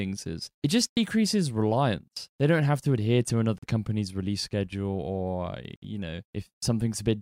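Silent gaps at 0.92–0.98 s, 3.58–3.65 s and 5.76–5.84 s cut the speech abruptly, each likely a Bluetooth dropout where late packets were discarded. The speech resumes further along, as though it had kept playing, with roughly 64, 43 and 64 ms missing.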